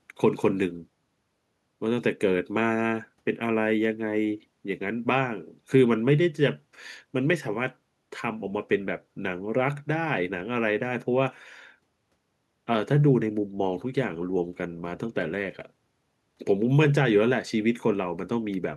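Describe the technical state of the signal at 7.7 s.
The signal at 7.7 s is intact, with no audible fault at that moment.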